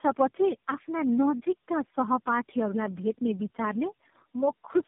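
Tandem speech coding affects the whole clip. The speech sounds rough, muffled and warbly, with nothing above 3.5 kHz. That fits about four speech codecs in a row, such as GSM full rate, AMR-NB and iLBC. Each one recoded the previous coder's damaged output.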